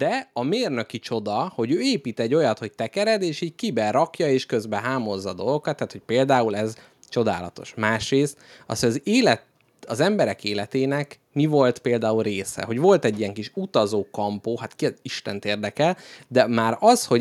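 Speech, with automatic gain rising from 0.34 to 1.99 s: the AGC judged the input too quiet and eased its gain up about 4 dB, lifting voice and background together.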